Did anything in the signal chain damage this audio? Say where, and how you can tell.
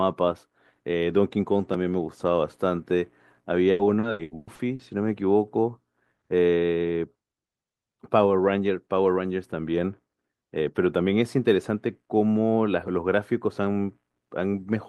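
Yes: repeated packet loss on the network leg, from 3.71 to 4.82 s. Seven gaps, the longest 120 ms, were patched by stretching the preceding audio, so 43% of that stretch is concealment. The speech turns choppy and robotic, with pieces missing.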